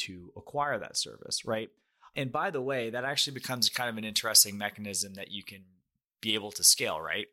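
Speech, with pre-emphasis left on from 3.18 s to the end: treble lifted about 11 dB at 10 kHz relative to 1 kHz, consistent with uncorrected J.17 emphasis, sounding thin and sibilant.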